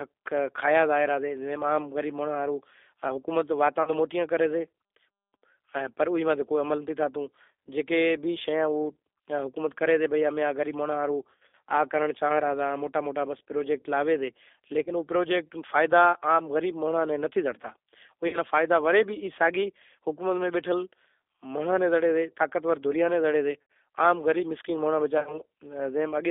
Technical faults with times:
0.00-26.30 G.729 codec
3.83-3.91 VoIP packet loss concealed by the speech codec
11.23-11.55 VoIP packet loss concealed by the speech codec
14.84-14.91 VoIP packet loss concealed by the speech codec
18.28-18.38 VoIP packet loss concealed by the speech codec
23.63-23.70 VoIP packet loss concealed by the speech codec
25.18-25.40 VoIP packet loss concealed by the speech codec

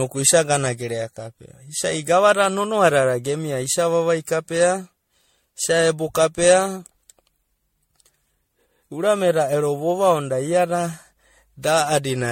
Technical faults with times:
0.00-12.32 generation loss

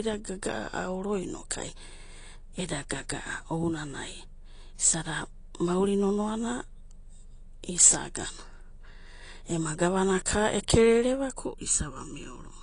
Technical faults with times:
0.00-12.62 AAC compression
11.40-12.62 channel delay (comb filtering)

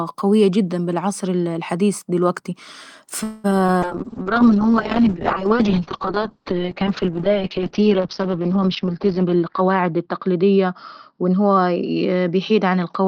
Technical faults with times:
3.23-3.46 call audio freeze
3.50-3.70 short concealed packet loss
3.84-13.08 call bitrate drop
9.18-10.65 jitter buffer speed-up

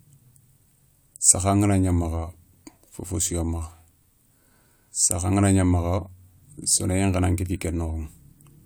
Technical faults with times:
none

